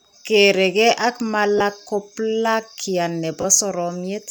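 At 1.58 s the speech breaks for about 23 ms. These are lost LE Audio frames. The gap fits three 7.5 ms frames dropping out of the Bluetooth link. The LC3 decoder fills in by repeating the last spectrum with random signs, so the sound turns into a brief noisy smear. At 3.41 s it happens again, over 30 ms, which fits four frames. This smear is slightly longer.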